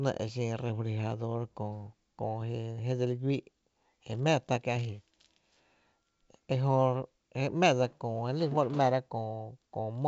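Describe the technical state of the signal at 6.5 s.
At 6.5 s the speech is intact, with no fault present, only the usual G.722 wideband telephone coding at 64 kbit/s, which leaves nothing above about 7.8 kHz.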